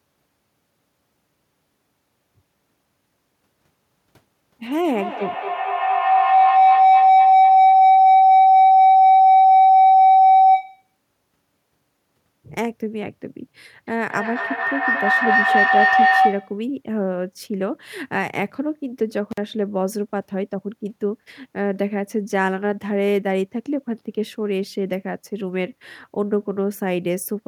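Speech recording with two kinds of fault. Feedback howl occurs from 4.69 to 10.98 s, peaking about 9 dB above the speech, and again from 13.87 to 16.69 s at about 7 dB above it. It is a tone near 700 Hz, with the loop repeating roughly every 200 ms. A mic-to-speaker loop with gain above unity keeps reinforcing its favoured frequency until the loop is broken. An intermittent contact drops the signal from 19.31 to 19.38 s, with the line open for about 47 ms. A loose cable or plug briefly breaks the connection, producing crackle at both edges and faint hiss during the gap.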